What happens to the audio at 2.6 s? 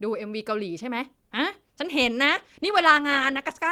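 At 2.6 s the speech is inside a call bitrate drop running from 2.27 s to the end: the encoder falls from 48 to 15 kbps and codes coarsely, sounding rough and watery without gaps, unlike packet loss.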